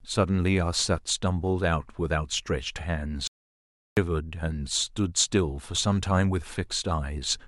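At 3.27 s the speech cuts out dead and comes back at 3.97 s, an audio dropout to silence lasting about 0.7 s. The gap is silent with no room tone, so the input likely dropped while recording carried on writing silence.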